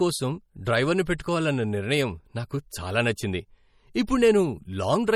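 Throughout the speech there's plainly audible MP3 compression, likely from a low bitrate around 48 kbps: nothing above 16.7 kHz, and a watery, swirly edge on sibilants.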